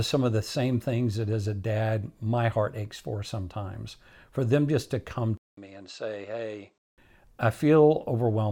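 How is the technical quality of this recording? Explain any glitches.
There's one real glitch in this speech. From 5.37 to 6.98 s, right after "them just to come", there's a 200 ms gap and then the sound goes dull and a bit quieter, about 5 dB down, with nothing above 8.3 kHz and a faint new noise floor. That's likely the input switching to a poorer device with a narrower band.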